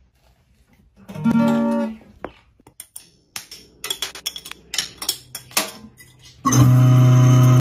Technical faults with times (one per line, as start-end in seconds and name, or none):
4.81-4.95 processor overload crackle